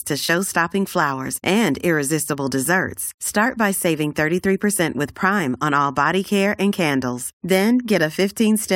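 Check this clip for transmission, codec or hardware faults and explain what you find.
No faults found in this recording.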